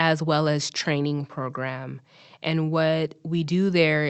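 No technical faults can be heard anywhere in the speech, which comes through as an ordinary call connection would carry it.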